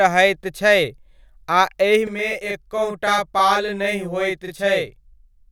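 Channel delay (doubling) runs from 2.07 s to the end of this speech clip. One channel arrives 40 ms late, and when both are summed to mono the delayed copy sits at equal level behind the original, so the speech sounds doubled, like a tight slap echo.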